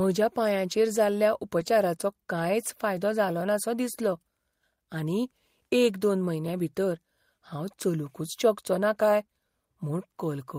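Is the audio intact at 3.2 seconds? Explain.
Yes, the speech runs through 3.2 seconds without any audible dropout, click, distortion or other fault at that moment.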